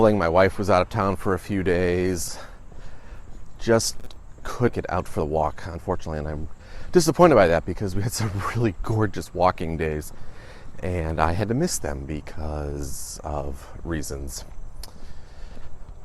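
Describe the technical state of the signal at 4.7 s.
At 4.67 to 4.69 s a skip ahead drops roughly a second of audio with no fill, so playback jumps forward and splices both sides almost directly. From 4.72 to 7.65 s a jitter buffer speed-up trims short pitch-period pieces, roughly half a second in total, so the sound runs at 118% speed with unchanged pitch.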